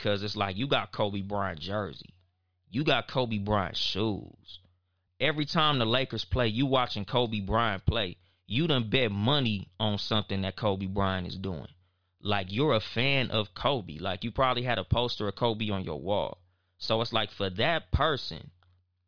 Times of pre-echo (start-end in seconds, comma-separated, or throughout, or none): none